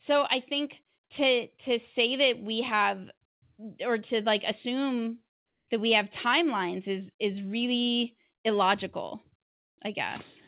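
Between "say that we have" and "or to like assume" (3.26 to 3.42 s), and again before "that we have timelines" (5.36 to 5.68 s), the background turns flat and featureless, dropping about 17 dB and then about 6 dB. This is comfort noise in place of the background, likely from discontinuous transmission.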